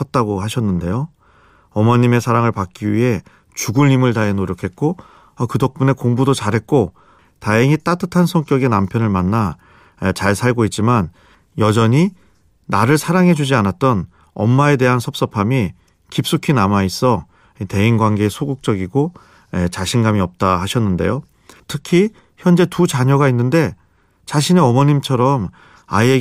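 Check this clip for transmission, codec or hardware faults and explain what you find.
No faults turned up when I checked this clip.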